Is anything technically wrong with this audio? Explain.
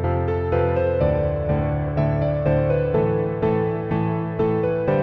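No, no technical faults heard.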